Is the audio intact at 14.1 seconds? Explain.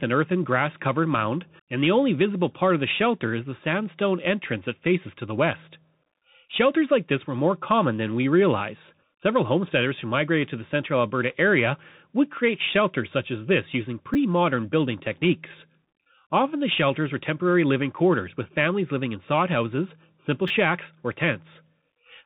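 No. At 14.14 s there is a repeated buffer. New audio did not arrive in time, so the device played the last 10 ms block a second time. One block repeats once, with a hard join where the copy starts. About 10 ms of the real audio is lost in its place. A repeat this short does not sound like a stutter. It comes across as a brief click or tiny buzz in the speech.

The Bluetooth CVSD headset codec also damages the sound at this moment, as it does through the whole clip. CVSD sends one bit per sample, saying only whether the waveform steps up or down, and it adapts the step size as it goes. The damage is plainly audible. Nothing above 3.8 kHz comes through, so the speech sounds narrow and muffled. S sounds turn scratchy, loud high sounds outrun the step and distort, and a granular hiss sits underneath. This fits a 64 kbps headset link.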